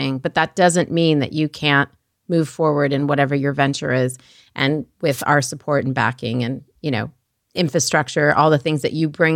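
At about 5.11 s there's a wireless microphone noise hit lasting roughly 0.13 s, right before "our support and backing". The FM radio link faded as reflected signals cancelled, so receiver noise surged up, giving a quick swish of static.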